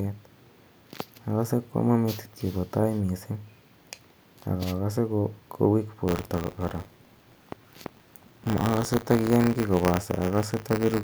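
From 6.07 s to the end of the speech, a buffer tearing fault sets in. The writer and the hardware reader of the ring buffer have drifted until they cross within each period, so a small slice of every buffer, around a twentieth, replays audio from roughly 30 ms earlier, spliced in with hard joins. The result is a steady robotic rattle at 100 Hz, suggesting a period near 10 ms, heard only while the voice is present.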